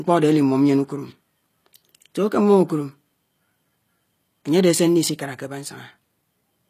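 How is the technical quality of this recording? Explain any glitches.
The speech carries plainly audible codec damage from start to finish. It sounds like HE-AAC compression, likely at a low rate near 24 kbps. Treble is rebuilt by copying lower bands upward, so sibilants turn gritty and lispy. Nothing survives above 15 kHz.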